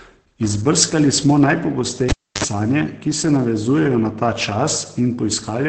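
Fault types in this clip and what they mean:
Opus voice compression: The encoder is running in its SILK speech mode at about 10 kbps, in 20 ms frames, with wideband coding that leaves nothing above roughly 8.7 kHz. At so low a rate the linear-prediction excitation is quantised coarsely, and the damage is heavy. The speech loses its upper air and takes on a muffled, hoarse, faintly robotic quality, with the grain of the coding audible throughout the clip.
Cable pulled and plugged in: A live cable is yanked out and reinserted between 2.09 and 2.44 s. The break gives a pop and then about 304 ms of near silence. As the plug goes back in and only the tip makes contact, a burst of 50 Hz mains buzz lasting about 58 ms comes through. A second pop follows as the connection seats fully and the speech returns.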